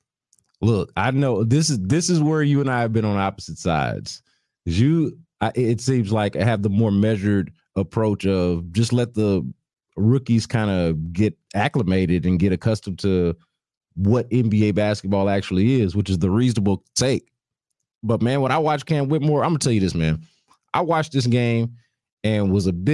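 No technical faults are audible.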